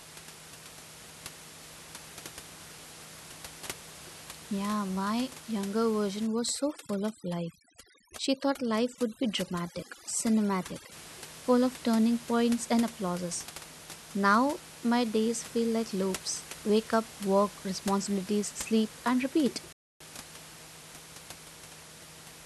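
From 6.27 to 10.92 s, overdone noise removal sets in: a noise reduction stage working far too hard pushes individual frequency bands down or out whenever they sit close to its noise estimate, and the softer parts of the speech get caught along with the room noise, which elsewhere sits about 17 dB below the speech. Across this stretch the background drops and breaks up into twinkling specks.

At 19.73 s the sound cuts out mid-flow and stays silent for about 0.28 s, resuming at 20.00 s. This is a playback stall, likely caused by the player running short of data or its thread being held up, so the output had nothing to play until it recovered.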